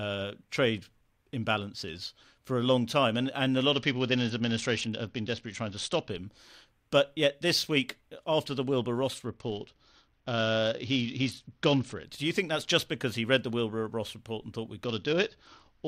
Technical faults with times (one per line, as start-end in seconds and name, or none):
3.73-6.10 Bluetooth SBC bit pool drop
9.27-12.04 Bluetooth SBC bit pool drop
14.84-15.87 Bluetooth SBC bit pool drop